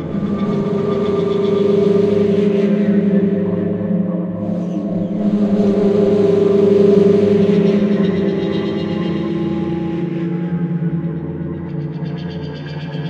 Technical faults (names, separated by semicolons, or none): sample clock jitter